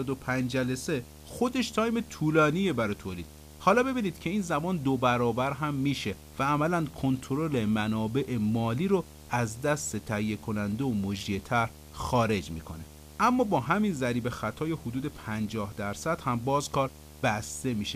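From start to finish the speech carries video or display buzz: a screen or video cable leaking into the audio at its 75 Hz field rate, roughly 20 dB under the speech, with hash above it. Unlike mains hum, 75 Hz isn't a 50 or 60 Hz multiple.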